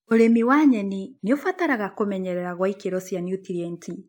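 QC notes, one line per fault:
Nothing to flag on this speech clip; I listened through and there's no fault to log.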